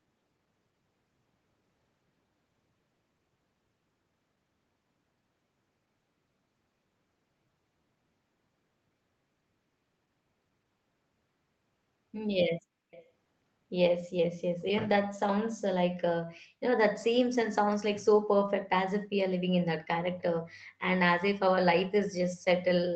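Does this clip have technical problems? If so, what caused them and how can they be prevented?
Yes. From 12.91 to 13.06 s a faint copy of the speech trails about 345 ms behind. This echo leak likely came from a loudspeaker whose echo canceller let some pickup return. Headphones, or a properly working echo canceller, on the loudspeaker side would prevent it.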